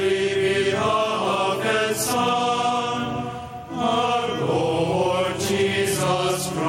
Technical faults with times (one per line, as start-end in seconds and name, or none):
0.00-6.68 gain pumping